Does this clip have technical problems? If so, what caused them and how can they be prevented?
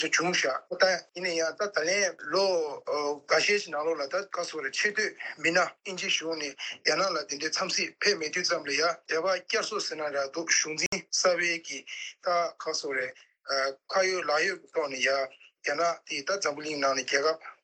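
Yes. A Bluetooth stall occurs from 10.86 to 10.93 s: the sound drops to silence for about 62 ms and then picks up again. The likely cause is radio interference holding back packets on the wireless link, so the headphones' buffer emptied and playback stopped until the retransmitted data arrived. Keeping the phone close to the headphones with a clear line of sight, away from busy 2.4 GHz devices such as Wi-Fi routers, would prevent it.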